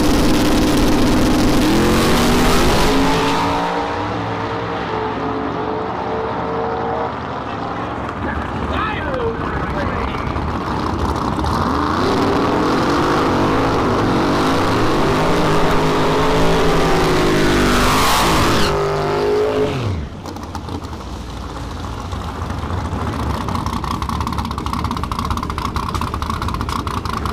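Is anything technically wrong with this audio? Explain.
Yes. At 15.71 s there is a repeated buffer: new audio failed to arrive in time, so the playback device replayed its last tiny block several times. Each block lasts 1.33 ms, which fits a 64-sample buffer. The loops join hard, so instead of a stutter you hear a brief click-like buzz, pitched near 750 Hz by the repeat rate, and a few milliseconds of sound are lost. A plain dropout would leave a silent gap instead, with no tonal buzz.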